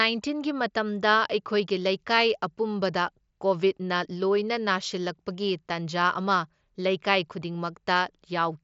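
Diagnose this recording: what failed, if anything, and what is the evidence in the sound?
Nothing failed in this recording; the sound shows no evidence of any fault.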